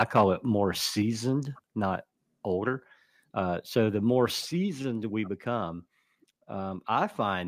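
From 0.00 to 0.24 s, just before "it more", the microphone input gain was likely set too high, driving the speech about 5 dB past the converter's ceiling. This is microphone overload: the tops of the loudest waveform peaks are flattened, affecting under 2 percent of samples in that stretch, so the opening syllables carry a harsh, crackly edge instead of a clean attack.

At 1.02 s, right after "it more", the software likely reacted to that overload by stepping the microphone volume down by about 4 dB. The voice and the background noise floor drop together in a single instant, heard as a sudden dip in level rather than a fade.

A second microphone volume step-down comes at 4.41 s, right after "so the more". The input gain likely dropped again, by about 3 dB, and the speech and ambience become abruptly quieter once more.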